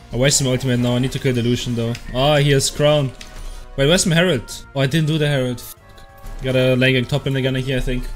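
Nothing in the signal points to a technical fault at any moment of the clip.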